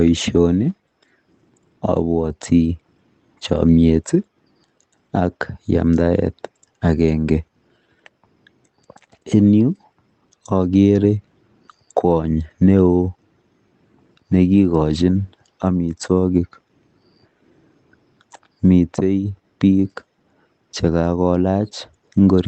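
Speech carried over a call link whose band stops at 8 kHz, consistent with a wideband Opus stream, with no faults to report.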